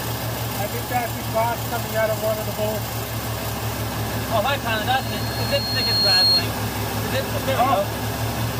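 From 4.90 s to 6.47 s a loudspeaker feedback squeal takes over: a microphone is picking up the speaker it feeds, and at 4.3 kHz the loop gain passes unity, so that one frequency keeps reinforcing itself. It swells over roughly a second and a half into a piercing whistle about 10 dB above the surrounding sound. A spectrogram shows a single bright horizontal line at 4.3 kHz thickening steadily, while the waveform's envelope grows and fattens until the squeal stops.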